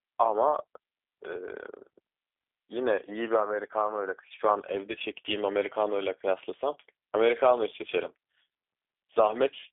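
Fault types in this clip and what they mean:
G.729 codec: the speech was rebuilt by a low-rate telephony codec from a vocal tract model, pitch predictor and sparse pulses, consistent with 8 kbit/s G.729A. The band is held to 300 Hz–3.6 kHz throughout, with plainly audible rough, synthetic texture.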